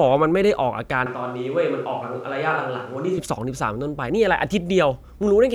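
From 1.06 to 3.18 s, a likely switch to a distant microphone: speech abruptly turns roomy and thin, drops about 5 dB, with room noise around 30 dB below it.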